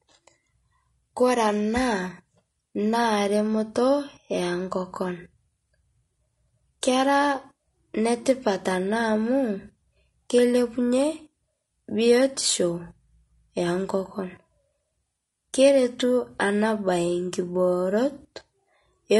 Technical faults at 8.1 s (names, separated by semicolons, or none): low-delay AAC compression